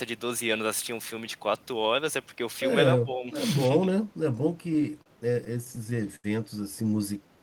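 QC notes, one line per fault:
3.05–3.35 s, speech suppressed in double talk: the voice sinks by around 5 dB and thins out in brief pieces adding up to about a fifth of a second. The likely cause is an echo canceller that, with both ends talking, could not tell this talker from the loudspeaker echo and turned everything down. On a waveform the envelope pinches inward.
4.73–6.26 s, repeated stalls (stutter): twelve short hiccups totalling 208 ms, the longest 81 ms, concealing about 14% of that stretch with no audio actually lost. Each time the jitter buffer ran dry, the receiver extended the last sound until new data arrived, so delivery drags and stumbles. On a spectrogram the fills appear as frozen, horizontally smeared slices repeating the preceding spectrum. The waveform shows looped or held segments, tapering in the longer gaps.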